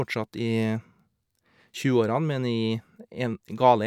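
No technical faults can be heard anywhere in this recording.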